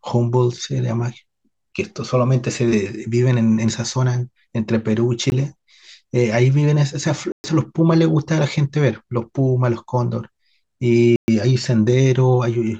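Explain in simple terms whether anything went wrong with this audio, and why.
Three times in this speech recording, a stretch of sound was swapped for a block of digital silence, most likely because the playback system failed to deliver audio in time. The sound drops out and returns abruptly. At 5.3 s the gap lasts about 20 ms. At 7.32 to 7.44 s and 11.16 to 11.28 s it lasts 120 ms, long enough to hear as a brief hole.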